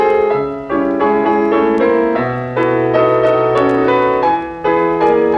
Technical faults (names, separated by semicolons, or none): none